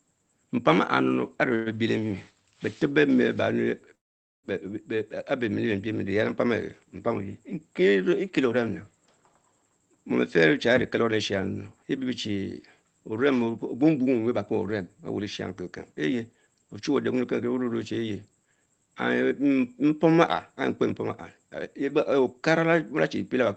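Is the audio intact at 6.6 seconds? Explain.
Yes, the speech at 6.6 seconds is intact, with nothing there beyond the ordinary coding of the call path.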